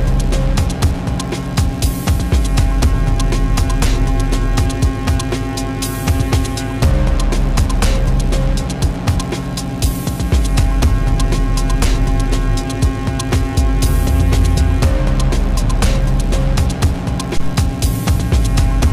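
Hard clipping runs through the whole recording. The signal is driven about 5 dB past what one stage in the chain can pass, so a few percent of the waveform hits the ceiling and is sliced flat. Those squared-off tops add high harmonics that the sound never had, heard as a brittle crackle riding on the loudest moments. Soft saturation rounds the peaks and adds warmth. This does not: the distortion switches on abruptly at the peaks and vanishes between them.

At 17.37 s a phantom power thump arrives, lasting to about 17.52 s. Phantom or supply voltage switching on a live input sends a sudden DC step through the coupling capacitors, and the input hears that step as a single deep low-frequency push that dies away within about 34 ms. A handling bump or plosive carries some acoustic texture. This is one smooth, pitchless pulse with a clean exponential decay, and nothing in the sound itself causes it.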